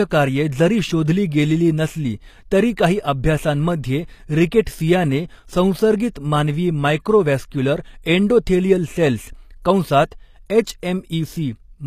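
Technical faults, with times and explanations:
Throughout, HE-AAC compression: the treble sounds gritty and plainly metallic, with s sounds turning lispy and nothing above 14.9 kHz. This is likely low-bitrate HE-AAC, around 24 kbps, rebuilding the upper band by copying lower harmonics upward.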